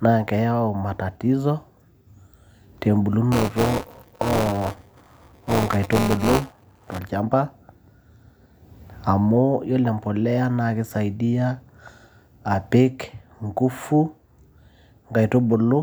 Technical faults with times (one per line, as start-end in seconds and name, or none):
3.32-6.99 buffer tearing